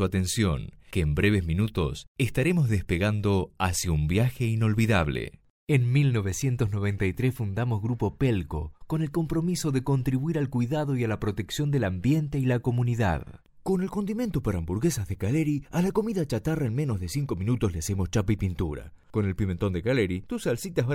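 No technical faults can be heard anywhere in the audio.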